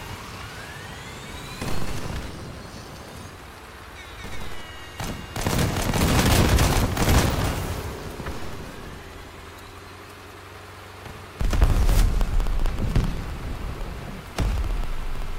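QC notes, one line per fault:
0.05 to 15.28 s, periodic USB or driver dropouts: a tick recurs every 64 ms, about 15 times a second and roughly two hundred in all, each a gap of around half a millisecond in which the signal falls to silence. A stalled transfer on the bus or in the driver causes each one. The spacing stays perfectly even, unlike random clicks or network packet loss, and the ticks sound only while there is signal, never in quiet passages.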